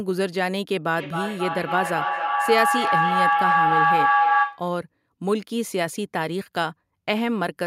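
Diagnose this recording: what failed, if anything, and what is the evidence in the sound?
Feedback howl in the call path: from 0.91 to 4.7 s a tone near 700 Hz builds, pulsing about every 300 ms, growing where echo would fade.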